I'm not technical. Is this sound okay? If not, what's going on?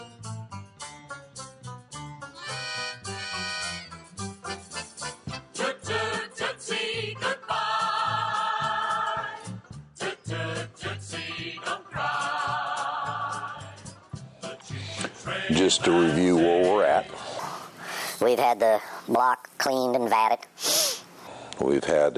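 No. From 17.39 to 21.27 s the sound turns high and rushed, about 1.45 times too fast and roughly six semitones up. This is a wrong sample rate: it fits audio recorded at 22 kHz being played back at 32 kHz.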